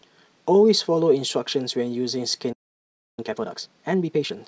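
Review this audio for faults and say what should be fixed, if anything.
At 2.52 s the speech cuts out and stays silent until 3.19 s, about 0.65 s, then resumes. That's a playback stall, likely the player running dry or its audio thread getting blocked. Bigger buffering or a higher-priority audio thread should stop it.

Right after, from 3.19 to 4.37 s, the speech runs at 1.5 times normal speed with the pitch unchanged. That's time-compressed catch-up, the player trimming its backlog by cutting and cross-fading short slices. Avoid the stall and this goes away too.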